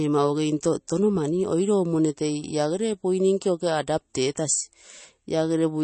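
From start to end, the speech carries plainly audible codec damage, most likely from MP3 compression at a low bitrate, consistent with something like 32 kbps. Nothing sounds above 8.3 kHz, so sibilants lose their top and sound dull. With too few bits, quieter frequency lines drop in and out from frame to frame, giving a watery, swirling texture with metallic chirps on s sounds, while consonant onsets sound smeared rather than crisp.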